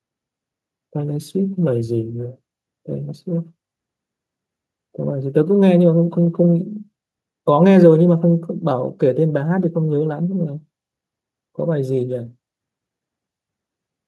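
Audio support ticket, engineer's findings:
Listened through the speech recording and found nothing to log, so there's no symptom, time or component to chase here and the ticket can be closed.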